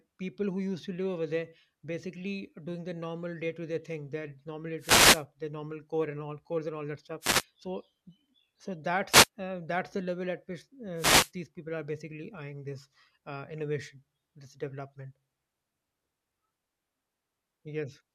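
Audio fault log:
4.79–11.31 s, wireless microphone noise hits at 4.79–5.24, 7.20–7.44, 9.09–9.28 and 10.96–11.31 s: four short bursts of hiss-like static, each lasting between about 0.2 and 0.5 s, wash over the speech. The analogue FM radio link from the microphone is fading as reflected copies of the signal cancel the direct one, so the receiver's own noise rises, giving the characteristic swish.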